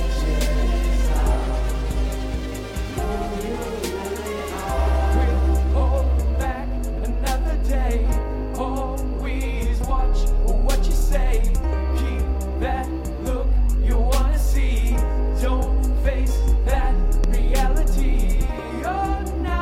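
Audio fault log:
17.24–17.26 s, loud pop: a single sharp pop about 10 dB above the sound, which carries on underneath, likely a brief voltage pulse from a plug, switch or static discharge.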